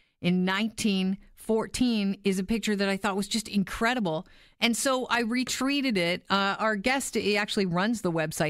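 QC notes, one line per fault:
No faults heard in the speech on this pass; nothing to log.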